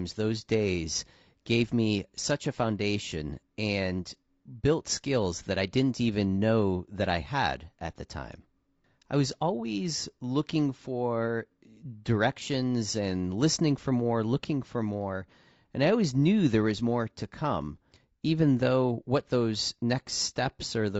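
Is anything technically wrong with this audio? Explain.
Yes. Throughout the speech, the audio has plainly audible damage, likely from low-delay AAC compression of the kind used in video calls, with a character that fits AAC-ELD at around 32 kbps. The codec works in very short frames to keep delay down, so it separates the voice's pitch harmonics poorly and has to spread its limited bits thinly. The result is a rough, grainy voice, with noise filling the gaps between harmonics and a top band that sounds thinned or synthetic.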